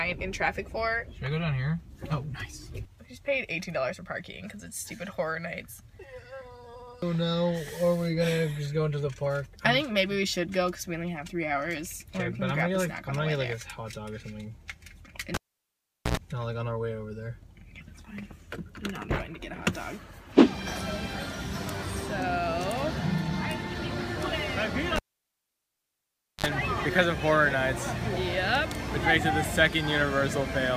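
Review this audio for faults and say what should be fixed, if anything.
A live cable was pulled and plugged in twice: the connection broke under signal, so each event opens with a pop and then drops to near silence. From 15.34 to 16.17 s the gap lasts about 0.78 s, and a 92 ms burst of 60 Hz mains buzz marks the tip touching before a second pop restores the sound. From 24.96 to 26.46 s the gap runs about 1.45 s, with a 56 ms burst of 50 Hz buzz. Mute the channel before unplugging, and secure connectors so they cannot work loose mid-take.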